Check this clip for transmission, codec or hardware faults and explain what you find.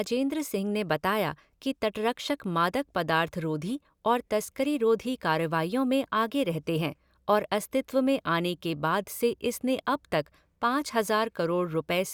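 I find no faults in this clip.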